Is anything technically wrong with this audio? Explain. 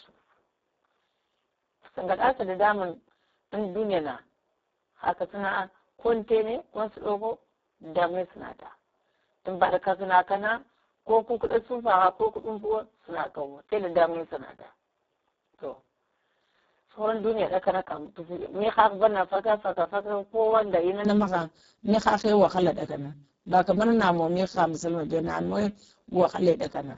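Yes, there are two faults.

Speex codec, throughout: heavy CELP coding starves the excitation, so speech sounds noisy and hoarse. Nothing remains above 7.7 kHz. The damage fits a very low bitrate, near 6 kbps.

Input switched to a poorer device, 0 to 21.05 s: the sound is dull and boxy, with nothing above 3.8 kHz. It likely comes from a narrower-band microphone. Speech brightens abruptly at 21.05 s, with no gap and little level change.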